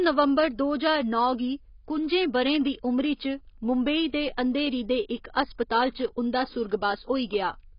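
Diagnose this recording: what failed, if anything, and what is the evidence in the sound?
AAC compression, heard throughout the speech: the codec stage is the likely cause. Nothing sounds above about 5.1 kHz, so the voice is dull, and sibilants come out as a smeared, fizzy hiss rather than crisp consonants, with a warbling texture on sustained sounds. The damage is heavy, which fits AAC-LC at a bitrate near 16 kbps: with so few bits, the encoder lowers its cut-off and quantises the remaining frequency lines coarsely, leaving gaps.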